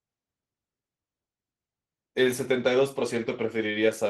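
From start to finish the speech carries Opus voice compression. The damage is plainly audible. The coder has spent too few bits on the excitation, so the voice comes out hoarse and slightly robotic. The sound suggests hybrid operation: a linear-prediction layer for the lower band, with a thinner transform layer above 8 kHz. The top of the spectrum is still present but coarse. The sound points to a low rate, near 16 kbps.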